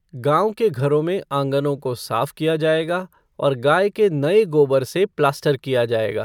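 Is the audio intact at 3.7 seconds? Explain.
Yes, at 3.7 s the speech runs on with no audible dropout, click, distortion or other fault.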